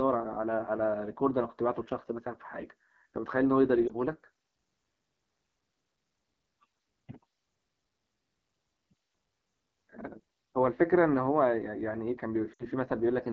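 Throughout, the speech carries a rough, raspy AMR wideband (HD Voice) codec texture, which fits one of its lowest rates, around 8.85 kbit/s. The grain stays constant rather than coming and going. At 3.87 to 3.93 s, lost AMR speech frames cause a brief warble and dip, consistent with a single lost frame. At 12.53 to 12.63 s, the sound drops to near silence within two frames, which fits about 60 ms of consecutive frames. Unlike a dropout to digital silence, these gaps are filled with a smeared repeat of the preceding sound.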